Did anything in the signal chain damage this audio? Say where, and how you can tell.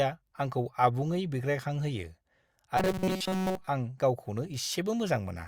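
Yes. From 2.77 to 3.68 s the speech turns into a rigid, metallic buzz fixed at 188 Hz, the robotic sound from repeated short buffers, most likely caused by buffer underruns that replay roughly 5.3 ms chunks for most of that stretch. A steady pitch, rather than dropouts or warbling, separates it from packet loss.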